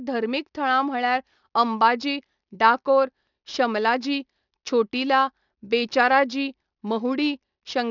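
Throughout the speech, the sample rate was cut without an anti-aliasing filter, which fits a drop to 12 kHz. Content above the 6 kHz fold point reflects back as unrelated tones about 25 dB below the speech, so sibilants turn gritty and metallic, with energy crowding the band edge.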